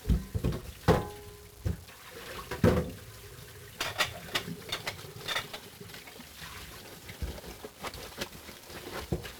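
From start to finish the sound is fuzzy and crackly, with a heavy broadband hiss burying the treble. This is 1-bit DFPWM compression: each sample keeps only one up-or-down bit steering an adaptive level, which fits a 48 kbps stream, leaving strong quantisation noise.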